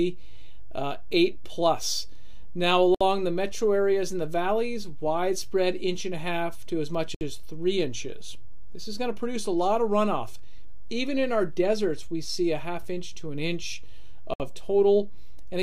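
A DC offset runs through the whole clip: the waveform sits shifted off the zero line by a constant amount, so one polarity reaches the ceiling sooner and some headroom is lost before any peak arrives. It is not audible as a sound in itself. On a waveform display the trace rides visibly above or below centre, and a spectrogram shows a steady band of energy at the very bottom of the frequency axis for the full length.

A gap at a join of encoded pieces opens at 2.95 s, lasting about 61 ms, then at 7.15 s for about 63 ms, and at 14.34 s for about 62 ms. Each is a short dropout in otherwise continuous sound, with the audio picking up exactly where it broke off. The cause is separately encoded pieces spliced without trimming, so each join keeps the encoder's start-up delay and the padded final frame of the previous piece. The three near-identical lengths fit that fixed padding. On a waveform each gap appears as a flat strip with edges smeared by the codec. 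A spectrogram shows a thin vertical blank column crossing all frequencies.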